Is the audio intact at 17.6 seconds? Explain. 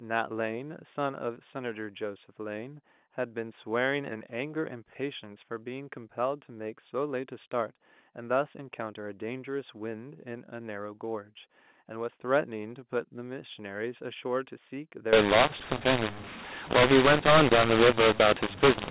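No. A mu-law and A-law mix-up runs from 15.13 s to 18.90 s: mu-law telephone samples are decoded as A-law, scrambling levels so the speech turns harsh and quiet gaps fill with noise.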